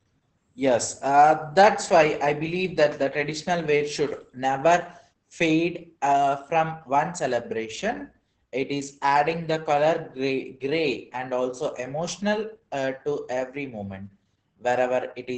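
Opus voice compression runs through the whole of this speech recording. The band stops near 8 kHz and the excitation is coarsely coded by the SILK predictor, leaving the voice muffled, hoarse and faintly robotic, damage heavy enough to suggest a bitrate around 10 kbps.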